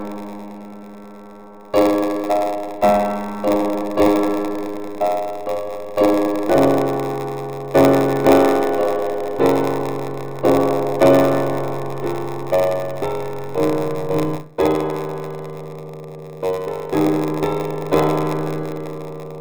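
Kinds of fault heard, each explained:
Block size mismatch (padded): short blocks are zero-filled to larger reads, fitting a 512-sample buffer, so gaps buzz at 93.8 Hz and audio runs at 0.938 speed, timbre unchanged.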